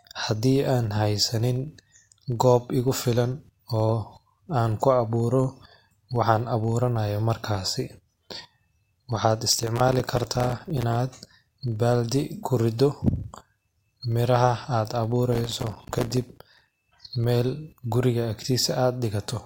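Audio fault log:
Throughout: filter restarted on every block. The filter loses its memory at each block boundary and starts again from silence, so every block opens with a small transient. These transients repeat every 40 ms and are heard as a 25 Hz buzz whose loudness rises and falls with the speech. A spectrogram shows faint vertical striations every 40 ms and a comb of energy at multiples of 25 Hz. The waveform shows small kinks at the same spacing.
9.53–10.95 s and 15.33–16.74 s (the second between "melaha ad" and "mel guriga"): processor overload crackle. The processor keeps missing deadlines for very short buffers, which fits buffers of about 3 ms, and each missed one leaves a tiny hard-edged gap of silence. Dozens of misses in a row, around a hundred in the second burst, make a gritty tearing over the speech. The waveform shows many short flat dropouts with abrupt edges, and the spectrogram shows dense broadband vertical clicks.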